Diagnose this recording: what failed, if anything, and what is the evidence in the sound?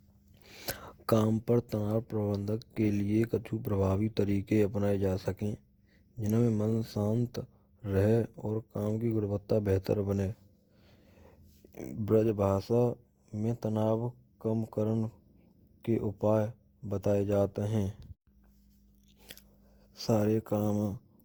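The failure sits at the codec stage and runs through the whole speech clip: a swirly, smeared, hollow quality with blurred attacks, well beyond what a single Opus pass at 64 kbit/s would leave. The likely cause is generation loss from around five successive encodes. Each re-encode quantises on a shifted frame grid, so noise and spectral holes pile up. Unlike a single starved encode, the band still reaches 20.2 kHz, so the damage is accumulated artefacts rather than missing treble.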